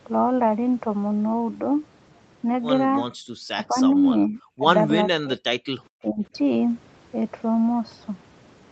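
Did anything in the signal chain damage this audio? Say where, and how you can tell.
Yes, the damage is in the call processing, specifically the echo canceller. At 3.11 to 3.26 s the room tone behind the speech gets pulled down hard, about 40 dB at its deepest, for roughly 150 ms, then comes straight back. That's background gated by the echo canceller: it heard loudspeaker output, assumed the microphone was carrying echo, and clamped the whole pickup until the far end went quiet again.

Right after that, the speech itself starts ducking in short chunks at 3.54 to 3.77 s, 3.95 to 4.04 s, 4.28 to 4.41 s, 4.57 to 4.63 s, 5.11 to 5.40 s and 6.02 to 6.35 s. Most dips are shallow, around 5 to 20 dB, but the one near 5.1 s goes down roughly 40 dB. This looks like speech suppressed in double talk. The likely cause is the canceller failing to tell the near talker from loudspeaker echo and attenuating both.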